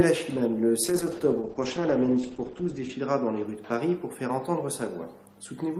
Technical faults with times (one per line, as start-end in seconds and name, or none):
0.85-3.51 call bitrate drop